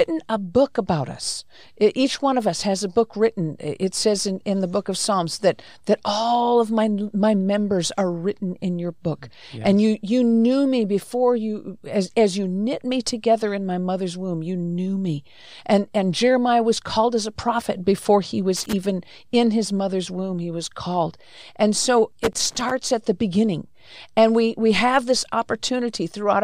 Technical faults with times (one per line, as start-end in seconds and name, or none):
18.57-18.73 loose connector crackle
22.24-22.71 loose connector crackle